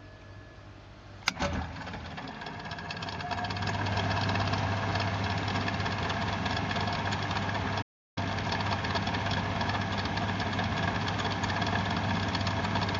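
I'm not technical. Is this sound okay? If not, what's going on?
No. At 7.81 s the sound cuts out for about 0.35 s, a playback stall, likely because the player ran short of data or was briefly held up.

From 8.18 to 8.52 s the audio then runs at twice normal speed. That is time-compressed catch-up: the player clears its backlog by trimming and blending tiny slices. Unlike a sped-up tape, the pitch stays normal.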